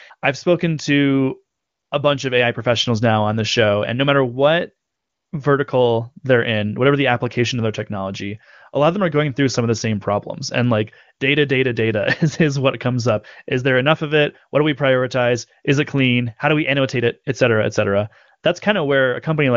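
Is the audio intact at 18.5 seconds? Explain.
Yes, the audio is intact at 18.5 seconds, with the speech carried cleanly through the AMR wideband (HD Voice) codec at its 23.85 kbit/s rate.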